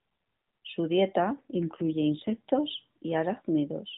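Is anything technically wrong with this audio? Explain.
Yes. From 1.34 to 2.52 s, an AMR rate drop: the mobile link forced the AMR narrowband codec to a lower rate, which fits a fall from 12.2 to 5.9 kbps. The band stays the same and there is no gap, but the speech turns rougher and more synthetic until the rate recovers.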